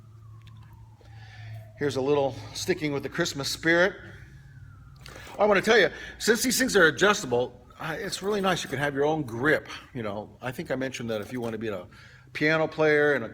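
At 5.09 s the sound drops without warning to an adaptive stream at a lower bitrate, and it stays there until 11.09 s, when full quality snaps back. Codec artefacts rise, which fits a switch from roughly 64 to 24 kbit/s Opus as the connection slowed. The waveform runs on with no gap at either change.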